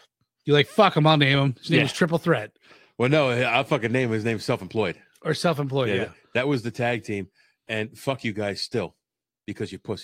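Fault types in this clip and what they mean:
No technical faults can be heard in this speech recording. There is nothing here that calls for a fault entry.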